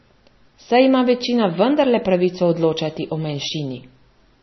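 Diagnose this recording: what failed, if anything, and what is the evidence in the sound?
The codec stage has failed: heavy MP3 compression runs throughout the speech, with nothing above 5.9 kHz and a watery, swirling texture that points to a bitrate near 25 kbps. Unlike a plain low-pass filter, the encoder likely also dropped weak frequency lines frame by frame, causing the swirl.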